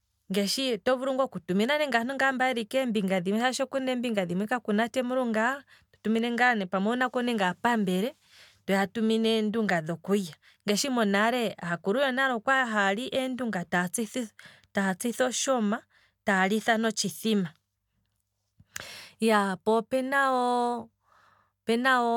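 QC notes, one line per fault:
No faults heard anywhere in this speech recording.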